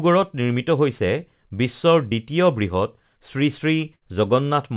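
At 2.10 to 2.13 s there's a short concealed packet loss: a few hundredths of a second never arrived, so the receiver stretched the previous sound, giving a quick smear. Then at 3.95 to 4.03 s a burst of packet loss hits: about 60 ms gets patched with a fading continuation, and a similar stretch simply goes missing before the audio resumes. Both sit inside narrowband audio with nothing above 4 kHz, which fits a G.711-type call path.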